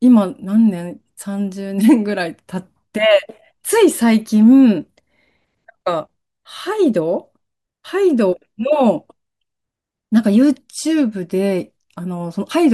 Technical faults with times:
none

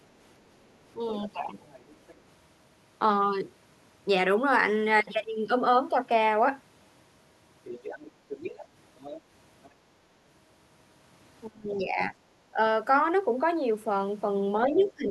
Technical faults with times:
1.23-2.18 other side's voice leaking through
7.65-9.70 other side's voice leaking through
11.48-12.59 speech suppressed in double talk
14.67-15.11 speech suppressed in double talk
14.74-14.91 other side's voice leaking through

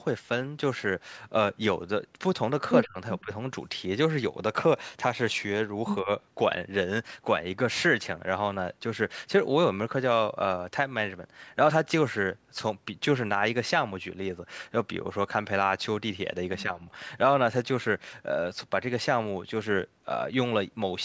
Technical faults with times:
2.85-3.32 speech suppressed in double talk
6.03-6.09 speech suppressed in double talk

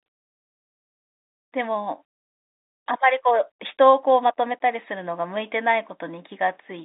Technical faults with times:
none

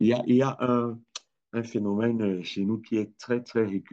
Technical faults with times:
none

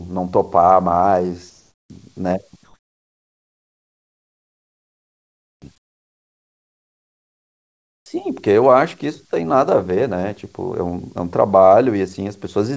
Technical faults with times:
1.50-1.90 comfort noise in place of the background
2.64-8.06 comfort noise in place of the background
8.04 onset clipped by the voice detector

